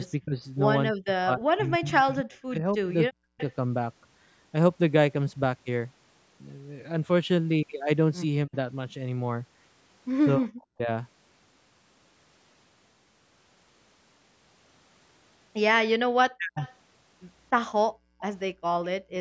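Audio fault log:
0.2 to 3.4 s, 8.46 to 8.55 s, 10.37 to 10.89 s and 16.36 to 16.61 s: speech suppressed in double talk. The speech dips sharply or breaks up in pieces, by up to about 40 dB. The first stretch loses around two seconds in total. The likely cause is both sides talking at once, so the echo canceller turned down the local talker along with the echo.
3.38 to 3.54 s, 16.6 to 16.75 s and 18.19 to 19.13 s: echo leak. A faint delayed copy of the speech returns 294 ms late. It sits about 20 dB below the speech, and the last one about 25 dB below. It is likely loudspeaker sound that the far end's echo canceller failed to fully remove.
17.9 to 18.19 s: background gated by the echo canceller. The room sound drops by about 37 dB for roughly 0.3 s, then returns. The canceller clamped the microphone while the loudspeaker played and released it afterwards. The call's band stops around 8 kHz throughout.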